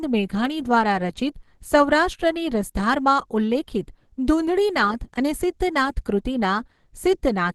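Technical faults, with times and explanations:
Throughout, Opus compression: the speech sounds muffled, hoarse and grainy, with nothing above about 12.1 kHz, likely from a low-rate hybrid-mode encode near 16 kbps.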